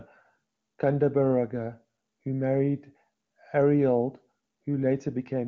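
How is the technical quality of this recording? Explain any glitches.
No glitches can be heard in the recording; the speech comes through without dropouts, clicks or distortion. It has the sound of AMR wideband (HD Voice) coding at one of its higher rates, likely near the top 23.85 kbit/s mode, where any coding damage is faint at most.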